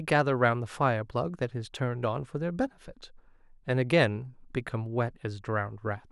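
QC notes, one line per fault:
1.76 s, dropped samples: a single sharp click in the speech, over in an instant, with no sound audibly missing around it. On a spectrogram it would show as a thin vertical line across all frequencies. The likely cause is that a couple of samples went missing from the stream, a gap far shorter than a millisecond. The waveform then leaps straight from one value to a later one, and that abrupt step is what produces the broadband click.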